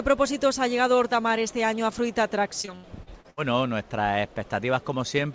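Between 2.62 and 3.39 s the audio turns choppy and robotic, the signature of repeated packet loss. Around six dropouts land in that stretch, the longest about 77 ms, and each is bridged by stretching the preceding sound, so roughly a third of the span is synthetic fill. The repeated extrapolation gives the robotic quality, while unfilled remnants leave audible holes. The band stops at 8 kHz, consistent with the G.722 call path it travelled through.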